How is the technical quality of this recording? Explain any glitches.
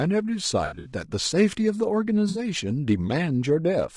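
The recording has plainly audible codec damage throughout, plus two brief dropouts.

The speech sounds rough and grainy across the whole clip. This is likely low-delay AAC compression. Its short frames resolve pitch harmonics poorly, and the grain fits a bitrate around 32 kbps.

There is AAC frame loss with concealment from 0.65 to 0.92 s, and again from 2.29 to 2.39 s. In the first patch, about 140 ms goes missing across 200 ms, with the longest gap roughly 70 ms. The second loses 60 ms. The decoder fills the gaps from the last good spectrum, so each patch sounds smeared and noisy.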